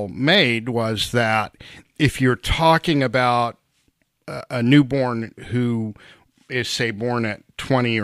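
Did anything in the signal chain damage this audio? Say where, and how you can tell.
No, no signal-chain damage audible.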